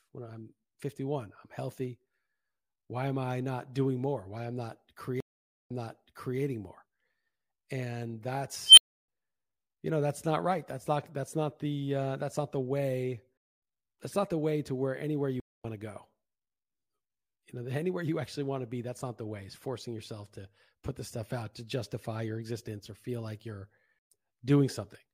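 Stream reconnects occur at 5.20–6.39 s and 15.40–15.65 s in this speech recording. After "I'm not" the player drops into 491 ms of silence and then repeats about 0.7 s of earlier audio from a fresh decoder. After "way to where anywhere" a 232 ms gap skips roughly a tenth of a second before "to go". An unstable filter at 8.66–9.08 s turns a squeal near 3 kHz into runaway output within 109 ms, then overflows into 310 ms of silence until the filter resets.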